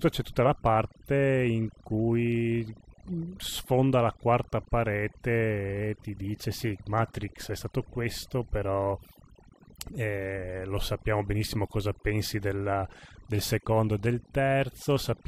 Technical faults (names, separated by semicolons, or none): overdone noise removal